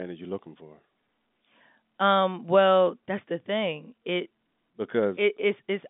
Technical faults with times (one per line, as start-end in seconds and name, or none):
none